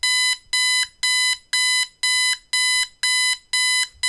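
No technical faults can be heard anywhere in this sound.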